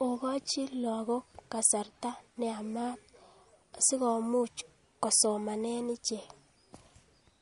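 Throughout the speech, the sound takes on a watery, swirling quality, with s sounds chirping metallically and consonant attacks smeared. This is likely MP3 compression at a low bitrate, around 48 kbps, where weak frequency lines drop in and out between frames.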